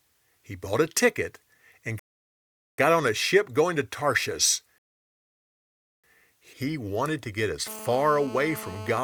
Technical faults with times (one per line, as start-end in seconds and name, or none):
1.99-2.78 rebuffering stall
4.78-6.04 rebuffering stall
7.67-8.99 GSM phone buzz